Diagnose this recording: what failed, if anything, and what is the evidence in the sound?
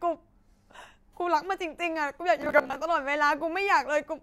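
Robotic sound from repeated short buffers, 2.42 to 2.76 s. Speech becomes a rigid 66.7 Hz buzz. Likely buffer starvation, looping 15 ms blocks.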